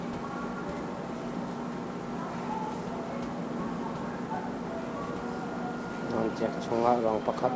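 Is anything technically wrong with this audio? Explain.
No, nothing's wrong here: the speech comes through a call connection that tops out around 8 kHz, which fits a wideband codec like G.722, and the room noise sits about 22 dB below the speech.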